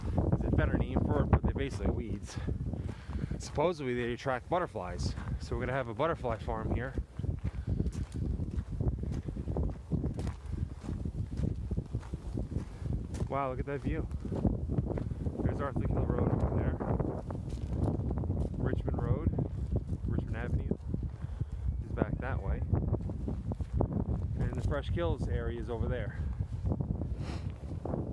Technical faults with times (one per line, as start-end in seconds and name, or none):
none